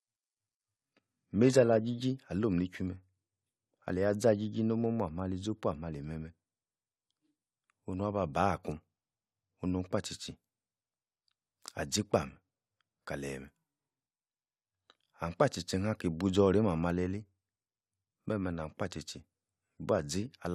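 For the first 2.0 s the speech comes through thin and swirly, with the top end either gone or replaced by a fizzy, synthetic-sounding treble. That's the classic adaptive stream starting at a low bitrate. The player grabbed a cheap rendition to get going fast, and the sound points to something like HE-AAC at around 16 kbit/s. Once it had sized up the connection it jumped to a fuller version, which fits AAC-LC at 96 kbit/s. At 2.0 s the detail snaps back in, with no gap at the switch.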